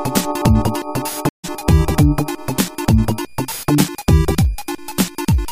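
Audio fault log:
throughout, switching supply whistle: a thin high whistle wanders between 2.40 and 2.45 kHz, sitting roughly 35 dB below the main signal. It comes from a switching power supply cycling in an audible burst mode or beating against a second supply, so the tone shifts as the load changes. On a spectrogram it is a faint horizontal line near 2.4 kHz that wobbles slightly and runs unbroken from start to end.
1.29–1.45 s, stream reconnect: the audio drops to silence for about 147 ms, then resumes roughly a tenth of a second further along than where it stopped, because the connection broke and the player reconnected to a live stream that had moved on. A freshly started decoder mutes or fades in its first frame or two. On the waveform this is a flat gap with an abrupt, slightly softened restart. On the spectrogram it is an empty vertical band with no continuity across it.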